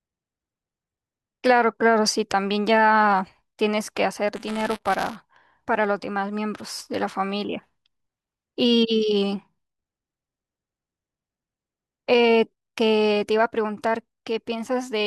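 A speech clip in which, from 4.36 to 5.16 s, the sound picks up a robotic, rattling buzz at 200 Hz that stops cleanly afterwards. This is buffer tearing: the program filling the playback ring buffer and the hardware draining it have drifted into overlap, so each 5 ms period carries a small sliver of stale audio from roughly 15 ms earlier, spliced in with hard edges. Those joins recurring every period produce the buzz.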